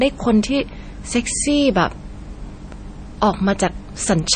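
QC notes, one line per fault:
throughout: MP3 compression, likely at a low bitrate near 32 kbps. Speech sounds watery and swirly, and the spectrogram shows nothing above 9.1 kHz, with flickering high-frequency patches.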